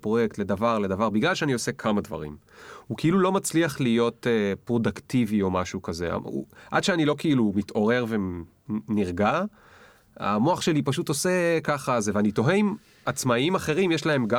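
No technical faults can be heard anywhere in this recording.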